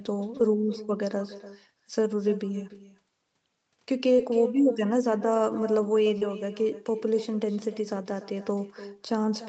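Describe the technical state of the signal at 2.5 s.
At 2.5 s there is echo with no canceller, present throughout. A far-end loudspeaker feeds the mic, returning speech about a third of a second later, about 15 dB quieter.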